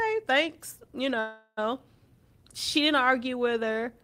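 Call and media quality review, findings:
Call audio freeze, 1.19 to 1.59 s: jitter buffer ran empty, likely from packets held up in transit. The last sound is stretched into a fading buzz for about 0.38 s, then 40 ms of silence. Speech resumes where it stopped with nothing missing, but now runs 378 ms late.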